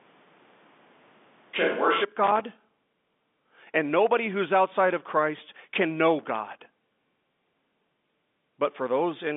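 From the first moment until about 2.02 s, the sound is hollow and roomy, with thinner bass. It is likely a switch to a distant microphone, one set well back from the talker, rather than added reverb. The level barely changes, and the room noise sits roughly 35 dB under the speech. When the close pickup takes over at 2.02 s, the change is abrupt and everything in the room drops away at once. That sudden step, with no gradual fade, points to a change of microphone rather than processing. The telephone band limits both mics to below about 3.8 kHz.

From 2.24 to 3.20 s, just before "and nobody who's outside", there is loose connector crackle. A worn or dirty contact keeps opening and closing, chopping the signal into an irregular, scratchy burst. It returns from 6.19 to 6.59 s, right after "can know". Unlike evenly spaced digital clicks or clean dropouts, these bursts are ragged and uneven, just as a contact would sound when it is moving.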